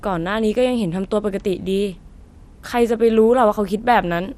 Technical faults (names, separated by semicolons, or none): MP2 compression